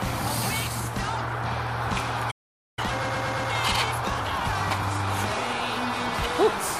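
At 2.31 s the sound cuts off mid-flow and the output goes silent until 2.79 s, a gap of about 0.46 s. This is a playback stall. The likely cause is that the player ran out of buffered data or its output thread was blocked, so nothing reached the output until it recovered. When the sound returns, it does not resume at its normal rate.

From 2.79 s to 5.09 s the audio runs hurried, at 1.25 times normal speed, while its pitch stays where it was. This is time-compressed catch-up. After the stall the player had a backlog to clear, so it removed small slices of the signal and cross-faded across the joins. That shortened the material to close the delay without shifting pitch, and the rate returns to normal at 5.09 s.

Inside that hurried stretch, from 3.02 s to 3.49 s, the same segment of about 116 ms is heard five times in a row, producing a stutter. This is repeated frames. A run of compressed frames, which fits a short block of a few frames, was written or delivered more than once, and the decoder played each copy in turn. 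The four extra passes add about 464 ms to the audio's length.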